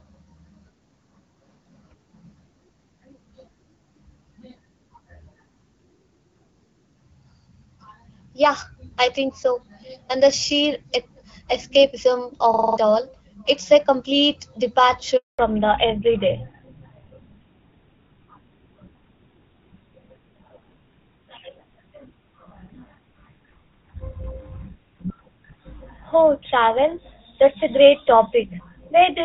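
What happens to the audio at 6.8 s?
Nothing goes wrong at 6.8 s: the speech is intact there, carried by the AMR wideband (HD Voice) codec at 12.65 kbit/s.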